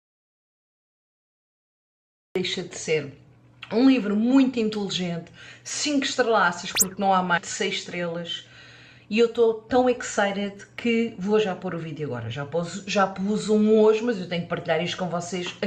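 Audio dropout to silence from the start until 2.36 s: the clip opens in silence, with no room tone, most likely because the input was lost while recording continued. Skip ahead at 7.37 to 7.39 s: roughly a second of audio was discarded, so playback jumps forward and the two sides join with no gap. Jitter buffer speed-up from 9.12 to 10.54 s: short pitch-period pieces, about a tenth of a second in total, were trimmed, so the sound runs about 6% fast at unchanged pitch.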